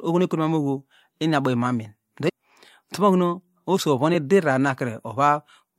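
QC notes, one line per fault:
2.28–2.30 s and 4.14 s: damaged data in a compressed stream. Two brief blips break into the speech. Corrupted bytes make the decoder misread those frames. It loses sync and hunts for the next frame header. The garbled output sounds like a short glitch.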